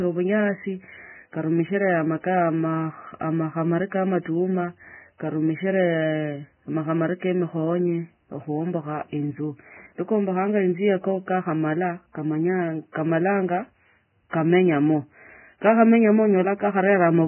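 From start to finish, the speech is dull and grainy. Nothing sounds above 3 kHz, so the upper treble is gone. What remains at the top is rough and hissy. Consonants lose their edge. Voiced sounds feel coarse rather than smooth. The likely cause is heavy Vorbis compression at a very low bitrate, somewhere near 10 kbps. The encoder drops the high band entirely. Below the cut-off it quantises the detail so coarsely that it turns to noise.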